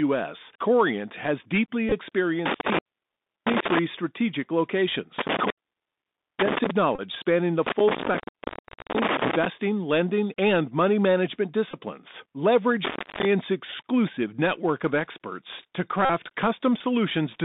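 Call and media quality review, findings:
Bluetooth CVSD headset codec, throughout: speech band limited to about 200 Hz to 3.7 kHz, with scratchy sibilants, slope-overload distortion on loud highs and granular hiss from 64 kbps one-bit delta coding.

Bluetooth headset packet repeated, at 1.89, 6.95 to 7.01, 11.71 to 11.81 (after "lending and money management") and 16.05 to 16.10 s (after "network of experts to"): brief buzz near 267 Hz from lost packets being replaced by the previous packet's bits. The repeat period fits 3.75 ms packets. Gaps run from 22.5 to 45 ms. The first event is scattered over 30 ms.

Intermittent contact, at 2.46 to 3.79, 5.19 to 6.71, 7.67 to 9.46 (after "spanning the") and 12.85 to 13.25 s: a loose cable or plug opens the line, giving crackle-edged dropouts with faint hiss. The open time within each window is about 681, 888, 768 and 305 ms.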